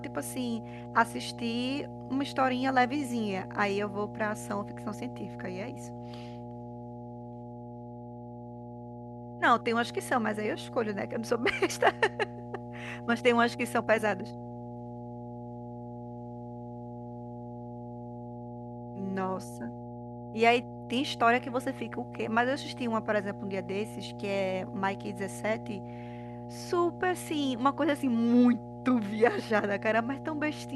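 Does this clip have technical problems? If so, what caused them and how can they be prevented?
Yes, there's mains hum under the speech for the whole clip: a steady 60 Hz drone with some low harmonics, sitting roughly 15 dB below the voice. That's power-line energy leaking in, typically through a ground loop or a nearby transformer. Use balanced cables, a single ground point, and keep gear away from power supplies.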